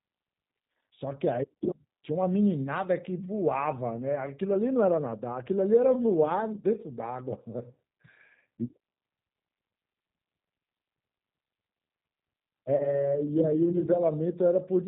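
A speech recording carried throughout by the G.729 codec at 8 kbit/s, and the coding damage is plainly audible. Nothing above 4 kHz survives, and the voice has a slightly rough, synthetic grain because it is rebuilt from a vocal tract filter, a pitch predictor and a few pulses per frame rather than from the waveform itself. That grain is what separates it from a simple narrowband telephone filter, which dulls the sound without making it buzzy or artificial. From 12.76 to 13.08 s there is VoIP packet loss concealed by the speech codec. About 40 ms of audio went missing, which fits four lost 10 ms frames. The decoder filled the gap by extending its last pitch and filter settings with falling gain, so the sound smears into a fading buzzy tone or coloured noise instead of cutting to silence. Because each frame builds on the one before, the voice stays weakened or distorted well after the loss itself, which is why the disturbance lasts about 0.32 s. 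A plain dropout would instead be a brief hole with a clean restart.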